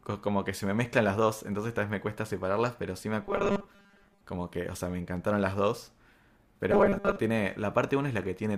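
From 3.23 to 4.24 s and again from 6.72 to 7.17 s, the speech turns into a rigid metallic buzz at 200 Hz: robotic sound from repeated short buffers, likely from audio arriving too seldom, so a 5 ms slice was looped while most of the real audio was skipped.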